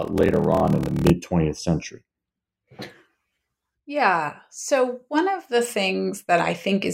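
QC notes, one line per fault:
0.00–1.10 s, block size mismatch (padded): a steady 38.3 Hz buzz sits under the speech, which runs at 0.889 times normal speed with pitch about unchanged. Each block carries a short stretch of zeros, which fits 1024-sample writes being padded out to larger read blocks.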